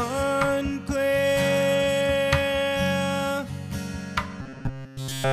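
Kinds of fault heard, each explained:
Robotic sound from repeated short buffers: from 4.42 s to the end, the sound collapses into a rigid metallic buzz at 134 Hz, likely because fresh audio stopped arriving and a roughly 7.5 ms chunk got looped over and over in its place.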